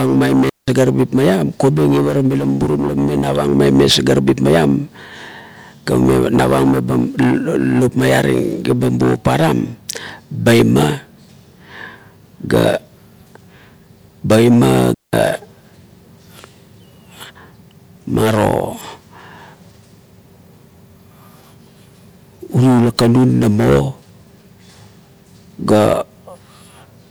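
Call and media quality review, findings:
Digital wireless dropout at 0.50 s and 14.94 s. Speech cuts to near silence for about 0.18 s and 0.19 s, clean holes, no noise burst either side. Wireless receiver losing too much data, muting with a very short fade.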